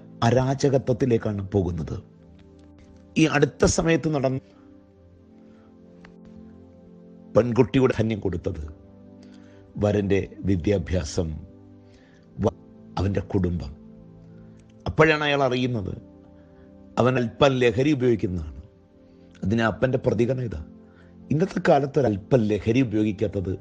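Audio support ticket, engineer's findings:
Damaged data in a compressed stream: five short chirp/blip bursts at 4.37–4.39 s, 7.90–7.92 s, 12.47–12.50 s, 17.16 s and 22.06 s, each roughly 10–25 ms. Probable component: decoder input. Corrupted bytes make frames misread or rejected, so the decoder loses sync and hunts for the next frame header. Spectrogram: thin broadband vertical streaks. Waveform: abrupt discontinuities with brief garbage segments.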